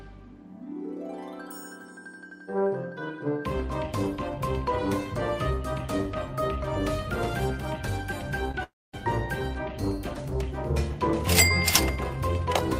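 The audio has two transmission faults close together. First, a short concealed packet loss at 8.51 to 8.55 s: about 20 ms of data failed to reach the decoder in time, so the receiver extended the preceding sound to cover the hole and then blended back into the incoming signal. That patch is heard as a brief smear or wobble. Then, from 8.63 to 8.95 s, the audio cuts out in what is likely a long network dropout, with about 300 ms never played. The receiver first carries the last sound on as a fading continuation, which decays into roughly 230 ms of silence before the real audio resumes further along. Nothing from that third of a second comes back.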